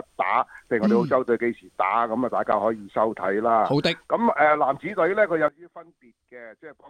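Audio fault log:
5.48–6.90 s, sudden gain jump: at 5.48 s the level drops by about 19 dB in a single step and stays down to the end. The background noise falls by the same amount at the same instant, which sets it apart from a fade, where the level slides down over time, and from a noise gate, which would cut the background while leaving the louder sound. The likely cause is a digital gain change applied without a ramp.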